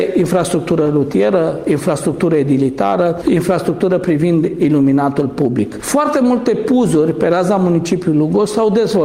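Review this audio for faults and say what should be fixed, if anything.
Nothing to fix; no faults heard anywhere in the audio.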